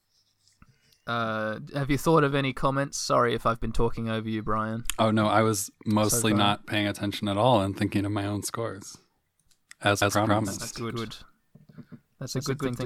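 A speech clip with a doubled audio track from 10.02 s to the end: an equally loud copy trails by about 150 ms, likely a second capture path.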